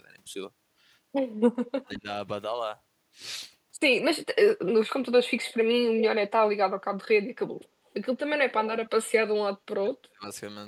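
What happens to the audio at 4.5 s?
At 4.5 s the speech sounds thin and hollow, with a dulled, phasey top end. This is the same colouring heard from start to finish, not an event at that moment. The cause is channel delay (comb filtering): one channel lags the other by only a few samples, around 0.07 ms. When the two are summed to mono, shared content cancels at evenly spaced frequencies, with the first notch near 7 kHz. That notch carves a fixed hole into the upper range of the speech.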